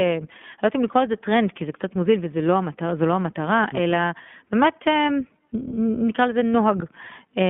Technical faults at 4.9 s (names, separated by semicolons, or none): iLBC codec